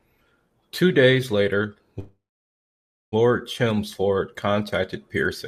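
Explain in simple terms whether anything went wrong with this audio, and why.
After "days later", a call audio freeze stalls the speech from 1.99 to 3.14 s: a fading buzz, then near-silence, then it resumes intact, likely from late network packets.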